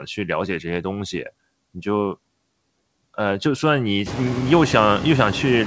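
Noise suppressor artifacts run throughout: background noise sinks about 22 dB between phrases and returns beneath speech, band by band rather than as a gate's whole-signal cut.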